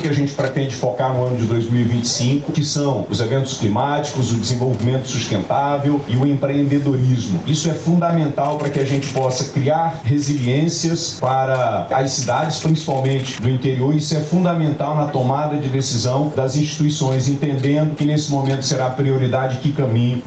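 Gain pumping runs through the whole clip: the gain swings by around 10 dB, likely from gain set far too high feeding a fast limiter that pulls it down on every loud sound.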